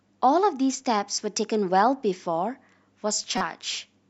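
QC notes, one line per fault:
3.38 to 3.41 s, corrupt frame decoded: a short chirpy blip pops out of the speech here, lasting only about 36 ms, which points to a single damaged compressed frame. Some of its bits got flipped and the decoder played it anyway, so misread gains and codes dumped energy at the wrong frequencies for just that frame's length. The error peaks fairly hot, around -10 dBFS.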